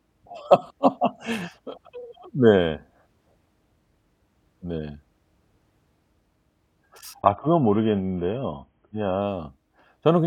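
An adaptive stream at a lower bitrate runs from 7.21 to 9.21 s. Partway through the speech the player switched down to a much leaner encoding of the same stream, the kind of change a slowing connection forces, and the sound fits a drop from around 96 kbit/s to roughly 16 kbit/s AAC. Without any gap, codec artefacts rise and everything above 3.8 kHz disappears. At 9.21 s the fuller sound returns just as suddenly.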